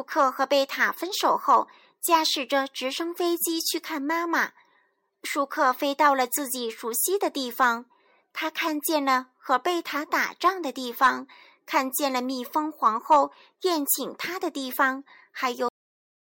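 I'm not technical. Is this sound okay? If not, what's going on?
No. The speech has a cut-off end. At about 15.69 s the sound stops suddenly, partway through. It does not fade or trail off. It just drops into total silence for the last half second or so, until the clip ends at 16.2 s. This happens when the final pieces of audio are never saved or played. The recording simply stops before the speaker has finished.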